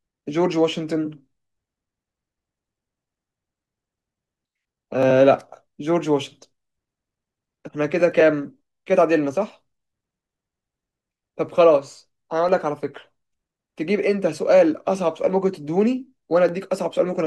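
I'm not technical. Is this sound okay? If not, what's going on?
No. Periodic USB or driver dropouts occur from 9.50 to 12.98 s: every half second, a tiny slice of roughly a millisecond goes silent, about seven times. Something on the computer briefly stalls the audio connection, leaving regular ticks in the speech.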